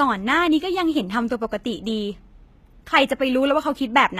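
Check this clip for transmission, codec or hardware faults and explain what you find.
One codec fault runs through the whole clip: HE-AAC compression, and the damage is plainly audible. The encoder likely coded only the lower spectrum and rebuilt the treble by spectral band replication, copying lower bands upward under a coarse envelope, at a rate that fits roughly 20 kbps. The speech keeps a top end, but it is synthetic, with its harmonics misaligned across the crossover, so s sounds come out gritty and lispy, and nothing is present above 14.9 kHz.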